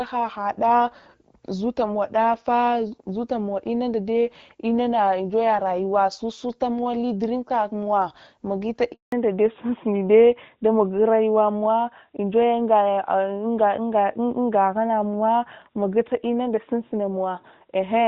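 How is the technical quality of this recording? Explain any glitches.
The call has two linked faults, a short dropout followed by a permanent loss of bandwidth.

From 8.92 to 9.12 s there is a handover gap. The phone switched the call to a different network, and no speech frames got through during the change. The speech fades out within a few tens of milliseconds. Then there is silence until the new link picks up, 200 ms in all. Whatever was said in that fifth of a second is gone.

Right after the gap, at 9.12 s, there is a fallback to narrowband that lasts to the end. Before it, the call was carried in HD Voice. The light coding texture fits AMR-WB at around 12.65 kbit/s. After the switch, nothing above 4 kHz remains. That matches an older narrowband codec such as AMR-NB at 12.2 kbit/s. Sibilants lose their edge. The speech turns duller and rougher.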